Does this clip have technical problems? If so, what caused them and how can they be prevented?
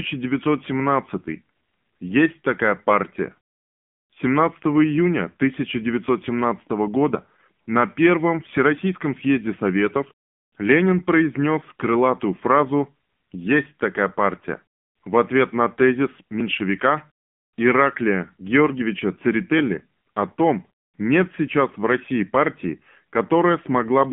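Yes. Throughout the speech, AMR narrowband mobile codec damage is plainly audible. The sound is confined to roughly 150 Hz to 3.5 kHz with nothing above 3.7 kHz, and the tone is buzzy and synthetic, which fits a low AMR-NB mode near 7.4 kbps. A plain low-pass filter would dull the sound without this coded, artificial texture, which comes from rebuilding speech through a vocal-tract model. To prevent it, capture or transmit the audio over a wideband or uncompressed path instead of a narrowband mobile call.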